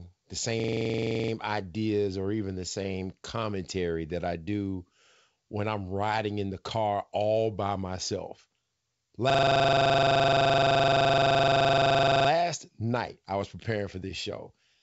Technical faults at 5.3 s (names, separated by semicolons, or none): none